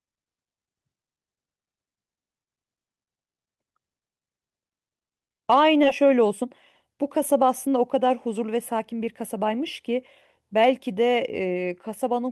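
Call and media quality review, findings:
Skip ahead, 5.83–5.85 s: playback jumps forward with no fill, and about a second of audio is missing. The two sides are butted together almost directly. Probable component is the jitter buffer, which discarded audio on overflow while later packets were already queued.

Jitter buffer speed-up, 5.93–9.60 s: the audio runs at 109% speed with unchanged pitch and sounds hurried. Probable component is the jitter buffer, which removed short pitch-period chunks, roughly a third of a second in total, to work off excess buffered delay.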